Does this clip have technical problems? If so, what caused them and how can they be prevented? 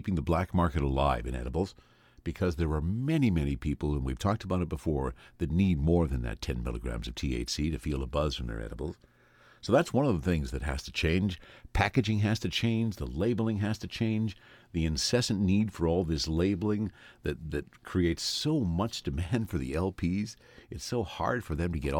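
No, there are no technical problems in this recording.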